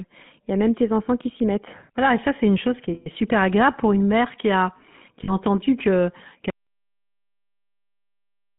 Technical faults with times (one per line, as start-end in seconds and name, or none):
0.00-8.59 GSM full-rate codec
2.94-3.08 lost GSM frames
5.24-5.33 lost GSM frames
6.50-8.59 audio dropout to silence